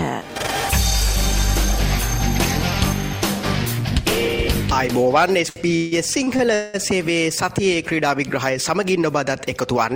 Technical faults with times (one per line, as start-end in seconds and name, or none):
5.49-6.76 repeated stalls (stutter)